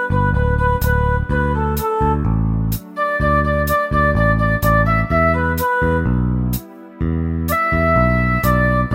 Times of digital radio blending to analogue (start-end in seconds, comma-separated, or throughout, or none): none